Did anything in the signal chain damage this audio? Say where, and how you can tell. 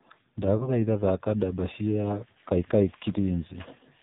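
Yes, at two stages.

Codec stage: the whole clip has passed through the AMR narrowband mobile codec, and heavily. Nothing reaches above 4 kHz, and the speech sounds buzzy and synthetic, as if rebuilt from a coarse vocal-tract model fed by sparse pulses. A plain telephone band-limit would only sound dull. This buzz and artificial texture point to a low AMR-NB mode, fitting roughly 5.9 kbps, where too few bits remain to carry the excitation faithfully.

Network or radio stage: between about 0.58 and 0.77 s there is a brief dip, and the speech comes back rough before settling. These are lost AMR speech frames. The decoder covered the missing data by repeating its last good pitch and filter settings at reduced gain, and the short extent points to a single lost 20 ms frame. A buffer dropout or packet gap without concealment would instead leave silence or a click. Here the sound is smeared over rather than cut.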